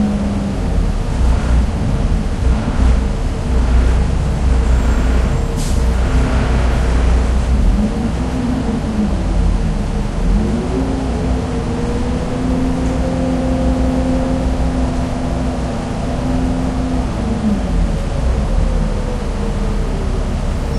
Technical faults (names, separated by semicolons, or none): none